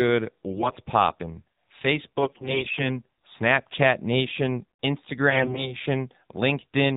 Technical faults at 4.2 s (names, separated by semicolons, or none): AMR narrowband mobile codec